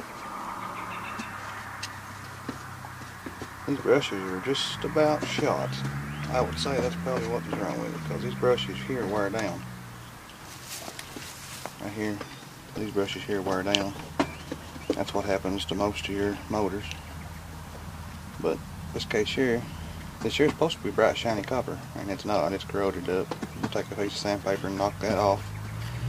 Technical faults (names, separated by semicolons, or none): dropped buffer (overrun)